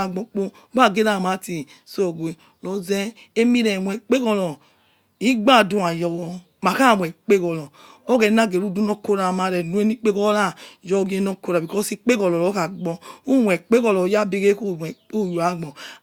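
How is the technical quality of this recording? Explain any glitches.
No audible glitches or faults.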